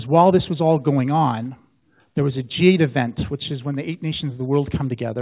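No faults can be heard anywhere in this audio.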